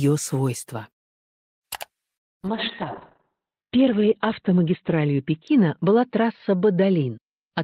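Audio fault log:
2.49–7.63 s call bitrate drop: the encoder was starved of bits and coded coarsely, so the sound turns rough and muffled, which fits a fall from around 32 kbps to about 7 kbps. The spectrogram shows the bandwidth cut from 20 kHz to 4 kHz, with blotchy texture.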